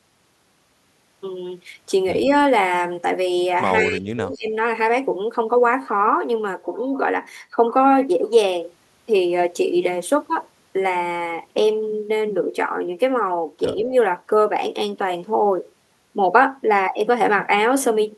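At 2.26 s, 3.8 to 4.52 s and 13.79 s the speech dips, mildly, then deeply, then mildly again, likely speech suppressed in double talk as the echo canceller ducked everything.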